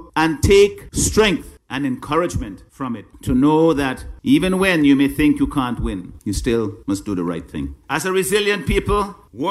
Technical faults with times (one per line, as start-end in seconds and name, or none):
none